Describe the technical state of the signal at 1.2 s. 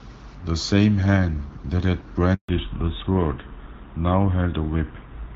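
At 1.2 s the speech is intact, carried cleanly by the AMR wideband (HD Voice) codec at 12.65 kbit/s with only light coding damage.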